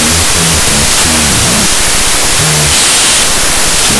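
From start to finish the audio suffers a wrong sample width, which fits 32-bit float data read as 16-bit integers. Each value is split into two, so the speech plays at half speed and an octave low, buried under loud, harsh noise made from mismatched bytes. A waveform looks dense throughout, while a spectrogram shows broadband noise filling every band, with faint, stretched speech harmonics showing through.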